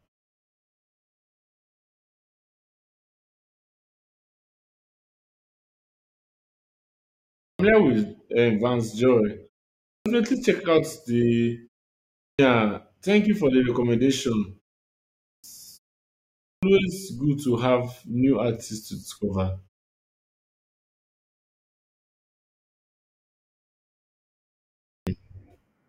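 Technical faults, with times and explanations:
7.2, 9.72 (just before "check out the"), 12.0 (just after "check out the"), 15.07, 16.25 (just before "good to") and 24.68 s, clipped start after a pause: the sleeping output device takes 0.34 to 0.39 s to wake, swallowing each onset. The waveform and spectrogram show silence ending in a hard, vertical edge with no rising attack.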